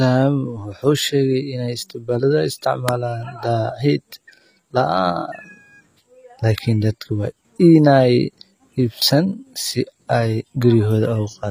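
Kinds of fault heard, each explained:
HE-AAC compression: The treble above the lower coded band sounds rebuilt rather than captured, with copied, loosely shaped highs whose harmonics fail to line up with the speech below, so s sounds come out gritty and metallic. The damage is plainly audible throughout, nothing is present above 15.5 kHz, and the character fits HE-AAC v2 at around 24 kbps as the likely cause. A plain low-pass or ordinary low-bitrate codec would dull the top end instead of keeping it falsely bright.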